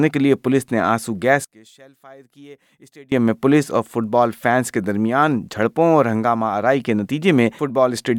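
From 1.45 to 3.12 s the sound suddenly drops by about 26 dB and nearly vanishes, with only a faint residue remaining. The likely cause is one channel inverted: one stereo side has flipped polarity, so the shared content cancels when the two are summed to mono.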